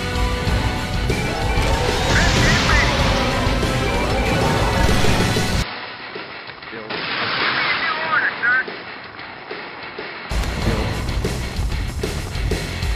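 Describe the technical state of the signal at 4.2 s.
At 4.2 s the signal is intact, with no dropout, clipping, glitch or other fault audible at that moment.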